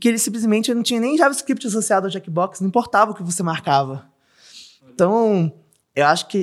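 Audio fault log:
No faults are audible anywhere in this speech recording.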